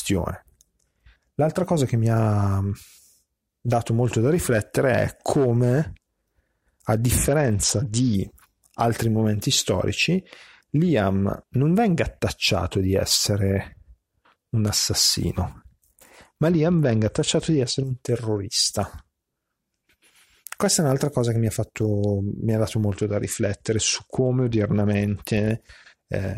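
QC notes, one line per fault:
7.17–8.14 s, 16.50–17.84 s and 22.94–25.50 s, Bluetooth SBC bit pool drop: the speech turns dull and loses its top end, with a gritty, grainy noise riding on it until the sound recovers just before "altri momenti storici" and just before "un terrorista"; the third drop begins shortly after "ha dato". The sender cut the SBC bit pool on a congested link, which fits a drop from 28 to about 9, near 78 kbps. The highest sub-bands were starved of bits and the rest coarsely quantised.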